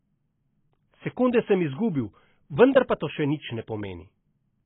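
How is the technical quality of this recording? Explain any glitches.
Quality is poor, with heavy codec damage across the whole speech clip. Nothing above 3.8 kHz survives, and sibilants and vowels carry a fizzy, warbling smear. This points to AAC compression, likely AAC-LC at a very low bitrate around 16 kbps, where the encoder lowers its cut-off and starves the remaining bands of bits.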